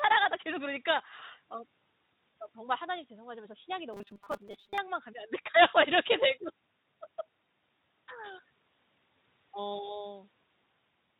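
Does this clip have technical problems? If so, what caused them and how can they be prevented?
Yes. At 2.34 s and again from 5.44 to 5.47 s, the network dropped a single 20 ms frame of VoIP audio, and the speech decoder covered the gap with packet loss concealment. It extrapolated from its last pitch and filter settings while lowering the gain, so each spot has a brief stretched, fading patch. The decoder's state builds frame by frame, so the speech sounds thin for a short moment after real packets resume. To prevent it, use a jitter buffer with enough depth and add forward error correction or redundancy, so single losses are rebuilt rather than guessed.

From 3.93 to 4.78 s the speech turns into a rigid, metallic buzz at 200 Hz. This is robotic sound from repeated short buffers. Audio was most likely arriving too seldom, so the playback software filled the time by looping its last short block. 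A 200 Hz repeat rate fits a block of about 5 ms, and about half of the real audio in that stretch was skipped. The speech still roughly follows its shape, but the fixed pitch is imposed on top. To prevent it, enlarge the playback buffer and keep the audio thread from being starved.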